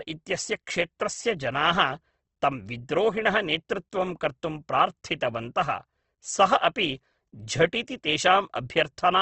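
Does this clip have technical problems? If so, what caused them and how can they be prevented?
Yes. Throughout, the speech sounds rough and grainy and stops at 8.2 kHz. This is likely Opus compression filling bit-starved bands with noise, which fits a rate near 16 kbps. Prevent it by encoding at a considerably higher Opus bitrate.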